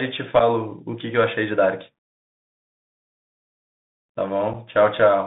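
Throughout, the speech carries the sound of a Bluetooth CVSD headset codec. The delta modulator tracks the waveform in one-bit steps, which fits a 64 kbps link. Hiss and scratchy sibilants are plainly audible. On a spectrogram, energy sits between 150 Hz and 3.7 kHz, with nothing above.

At 0.39 s and again at 4.53 s, unconcealed Bluetooth headset packet loss leaves a gap of about 7.5 ms, which fits a single lost packet. Each gap is heard as a brief hole in the speech with abrupt edges. The waveform shows an abruptly cut flat notch, and the spectrogram a thin vertical gap.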